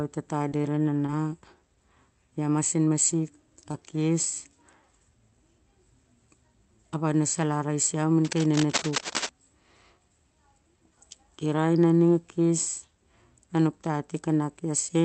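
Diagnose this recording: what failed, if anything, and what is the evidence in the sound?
On the network side, repeated packet loss (robotic sound) struck between 0.49 and 1.10 s. A run of brief holes, the longest about 22 ms, was patched by extending the previous sound, so roughly a sixth of that stretch is synthetic and comes out choppy.

Overlapping it, the receiver's jitter buffer ran short or raised its target delay and performed a jitter buffer slow-down from 0.73 to 1.30 s, repeating pitch periods to rebuild its reserve. That added 59 ms, so the speech plays at 91% speed with unchanged pitch and sounds slightly drawn out.

A short concealed packet loss follows at 3.72 to 3.76 s, just after "ia masen masik". About 20 ms never arrived in time and was filled by continuing the preceding sound, leaving a quick smear or wobble before the real audio blends back in.

In the analogue wiring, cable scratch noise runs from 8.25 to 9.30 s, right after "lau main": dense, irregular rustling bursts sitting only a little below the speech level. 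A worn cable or connector being moved is the likely cause, its contact resistance fluctuating rapidly while it shifts.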